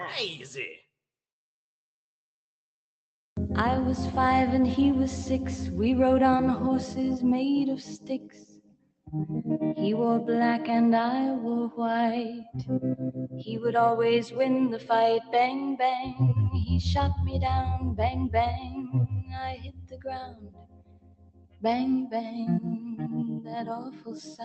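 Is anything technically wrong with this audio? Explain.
Yes. A speech-oriented noise suppressor was left active on this non-speech audio. It treats sustained tones, ambience and decaying tails as background noise and pulls them down, while sharp onsets mostly pass. The result is gain that swings by about 15 dB across the clip, so the sound pumps and thins, with held material sinking and returning unevenly. The top end stops near 8 kHz, consistent with the low-bitrate Opus call path the audio came through.

The suppressor cuts hardest in specific stretches. These are 7.8 to 9.1 s (deepest about 19 dB), 12.35 to 12.56 s (about 15 dB), 12.96 to 13.68 s (about 16 dB), 14.23 to 14.38 s (about 11 dB), 14.7 to 16.2 s (about 16 dB), 18.6 to 21.6 s (about 19 dB, roughly three seconds affected), 22.78 to 23.08 s (about 7 dB) and 23.4 s to the end (about 15 dB). In each of these sound cut by the noise suppressor, steady or fading content sinks in level or has its decay chopped short.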